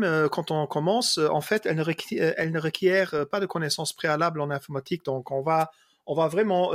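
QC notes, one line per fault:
1.55 to 1.60 s, wireless microphone noise hit: a quick swish of static lasting about 45 ms, right after "quand on commence en" and before "elle ne requiert elle". The mic's FM radio link faded for a moment as reflected signals cancelled, so receiver hiss briefly jumped up.
5.59 to 5.64 s, wireless microphone noise hit: the same thing again, another short static burst of about 43 ms from a second momentary dropout in the radio signal.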